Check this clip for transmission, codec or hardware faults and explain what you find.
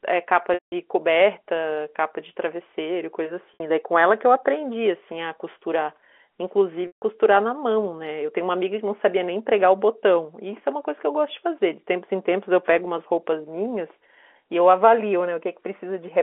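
Three dropouts from packet loss with pitch repetition, at 0.54 to 0.72 s, 3.54 to 3.60 s and 6.87 to 7.02 s. The 60 ms gap sounds like a briefly held, buzzy tone. The 180 ms and 150 ms gaps buzz, then fade to silence before the speech cross-fades back. Each time, the receiver bridged the missing audio by looping the last pitch period and fading it over roughly 50 ms, which fits 30 ms packets. The G.711 telephone band, 300 Hz to 3.4 kHz, stays audible throughout.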